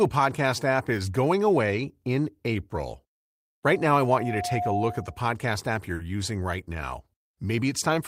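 At 3.64 s a loudspeaker feedback squeal starts: the microphone hears its own loudspeaker, and near 714 Hz the loop gain passes unity, so that tone swells over about a second to roughly the level of the speech, ringing as a steady whistle until it stops at 5.29 s.

At 5.95 s there is a short concealed packet loss. About 40 ms of the stream arrived too late, and the receiver bridged the gap by extending the preceding sound, then blended back in by 6.01 s, leaving a brief smeared wobble.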